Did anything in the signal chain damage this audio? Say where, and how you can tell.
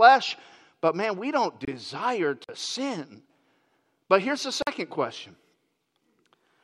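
Yes. Just after "but man we don't", the speech drops out from 1.65 to 1.68 s. The gap is a clean 26 ms of silence, and the sound then carries on. That points to the playback stage. The likely cause is a Bluetooth stall: radio interference delayed packets, the headphones' buffer emptied, and output paused until the resent packets caught up.

Two more holes sit at 2.44 to 2.49 s and 4.62 to 4.67 s. The second comes right after "here's the". Each lasts about 46 ms. Each is a block of digital silence, cutting out and back with a hard edge. The identical length fits a 2048-sample buffer. This is a driver or buffer fault. Most likely the program missed its deadline, so the output buffer went out empty.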